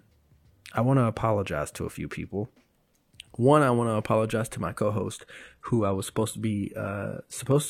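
Speech, and from 5.19 s to the end of the clip, right after "to apologize to my", the stream switches to a lower bitrate. The quality changes abruptly with no gap, and codec artefacts rise, with nothing above 14.9 kHz. That fits a step down from 96 kbit/s AAC to a 20 kbit/s HE-AAC rendition after the connection slowed. The seamless, sustained switch is what separates it from packet loss or a dropout, which would leave gaps or glitches.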